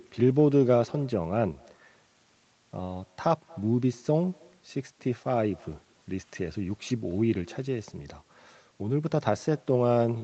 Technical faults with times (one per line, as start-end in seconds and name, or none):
0.00-10.24 echo with no canceller